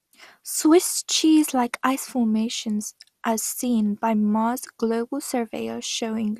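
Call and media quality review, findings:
Generation loss, whole clip. Speech sounds swirly, smeared and hollow, with consonant attacks blurred, more than one 96 kbit/s MP2 pass would cause, and nothing above 15.8 kHz. Likely repeated decode/re-encode in the MP2 path, around seven passes. Each pass requantises on a shifted frame grid, so the noise stacks up. Check for transcode hops in the chain.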